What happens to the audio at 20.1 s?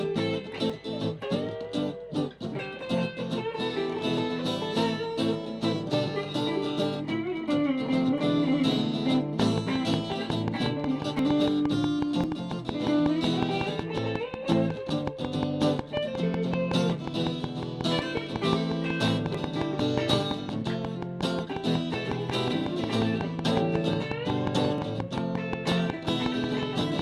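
At 20.11 s you get a dropped buffer (overrun). The program likely didn't collect its samples before the hardware overwrote them, so roughly 20 ms of audio is lost and the two sides are butted together. It comes across as a small jump forward, and there's no gap of silence.

That moment also falls inside a train of clicks running from 9.40 s to the end at 27.00 s. It's a steady tick at about 5.5 per second, regularly spaced, and roughly 15 dB above the sound. That's likely interference from nearby equipment or a faulty connection or power supply injecting the same pulse over and over.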